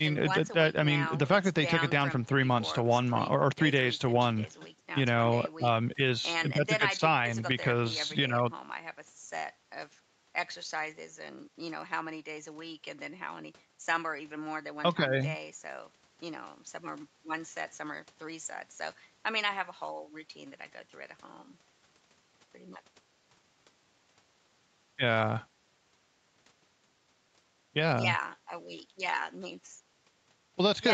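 Speech, with no technical faults to be heard.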